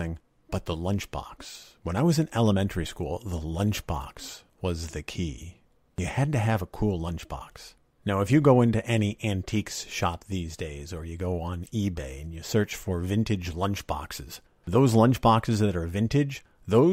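No technical faults can be heard anywhere in the recording.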